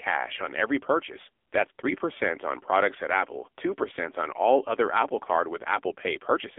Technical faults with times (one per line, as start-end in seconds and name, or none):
0.00-6.58 AMR narrowband mobile codec